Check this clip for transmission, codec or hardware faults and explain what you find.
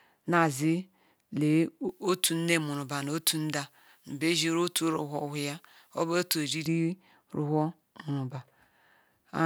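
Pre-emphasis left on runs from 1.89 s to 6.66 s of this speech clip. The treble was lifted before recording or transmission so it would survive the channel, but the matching de-emphasis that should restore a flat balance never happened. The top end stays raised, about 11 dB at 10 kHz relative to 1 kHz, a shape that fits a J.17 curve. The voice turns thin, glassy and harsh, with sibilants hissing forward.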